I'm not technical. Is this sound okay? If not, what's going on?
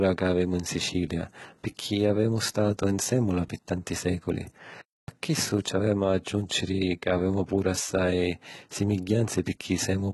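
No. Throughout the speech, s sounds and the top end come across gritty, metallic and lispy, likely from heavy HE-AAC compression, which rebuilds the treble by copying lower sounds upward.

At 4.81 s, right after "nsèmmula pi tanti sèculi", the audio goes silent for about a quarter second before resuming with "chissu ci avemu a". This is a playback stall, likely the player briefly running out of data.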